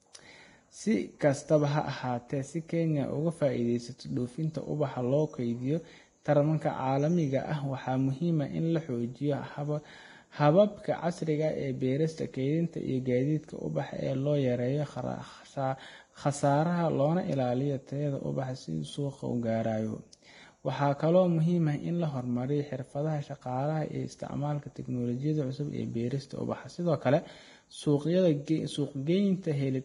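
From start to end, the speech has nothing above 10.6 kHz, and the treble below that is hissy and grainy, with blurred attacks. This is likely heavy Vorbis compression near 29 kbps. Unlike a plain low-pass filter, the top band turns to coarse noise rather than simply dulling.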